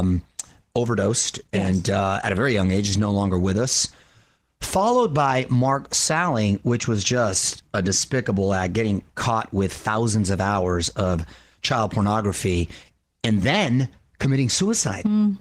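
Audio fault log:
Throughout: Opus voice compression. The speech carries a plainly audible hoarse, slightly robotic roughness, the sign of a linear-prediction voice coder quantising its excitation coarsely for lack of bits. Unlike a plain low-pass or band-limiting fault, the top end is not simply removed. It remains present, which fits hybrid mode, where a sparse upper layer sits above 8 kHz, at around 16 kbps in 20 ms frames.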